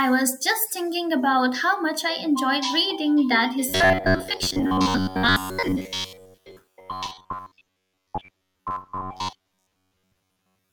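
Right after "reading that", at about 3.69 s, the speech turns robotic and stays that way to the end. It's a stiff metallic buzz pinned at about 94 Hz that still loosely tracks the words. That pitch matches a chunk roughly 10.7 ms long being replayed over and over, so the likely cause is repeated short buffers. Audio arrives too slowly, and tiny slices get looped while most of the real signal is skipped.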